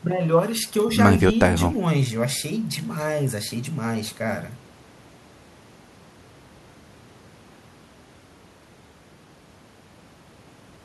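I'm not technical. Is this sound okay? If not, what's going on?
Yes, nothing in this speech recording points to a technical problem. There is no dropout, glitch or distortion anywhere in it.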